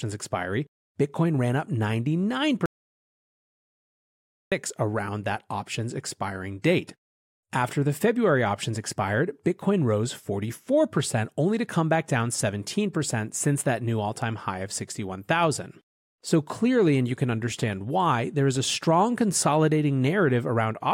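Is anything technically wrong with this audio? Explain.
Yes. From 2.66 s to 4.52 s the speech drops out to total silence, with no room tone. It returns mid-flow at "around that options expiring". This audio dropout to silence lasts 1.86 s. Likely the input was lost while silence kept being written.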